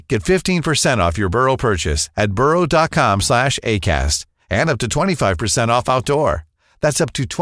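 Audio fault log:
No faults heard anywhere in this speech recording.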